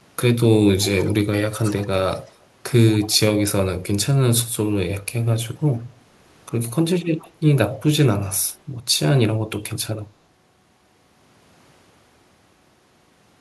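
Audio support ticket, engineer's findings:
Echo leak at 0.82, 1.63, 2.26, 3.01, 7.03 s: speech copies at a fixed 107 ms lag, about 15–35 dB down. A discrete repeat, not a reverb tail. Likely far-end canceller residue.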